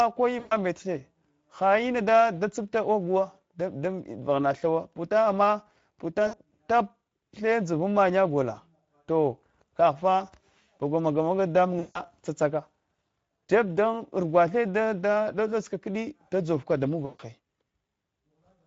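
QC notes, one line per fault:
throughout Speex codec: The speech is plainly hoarse and noisy. The CELP coder has few bits for the excitation, so the fine structure of the voice is replaced with rough, buzzy approximation. The damage level points to a mid-rate setting, around 16.8 kbps.
0.39–0.54 s, 6.27–6.41 s, 11.79–12.01 s (just after "maga maga"), 17.05–17.22 s VoIP packet loss concealed by the speech codec: Gaps of about 120, 60, 160 and 140 ms are filled by the decoder repeating its last pitch and filter at falling gain. This turns each gap into a fading buzzy or noisy smear, and the speech stays weak briefly after each one.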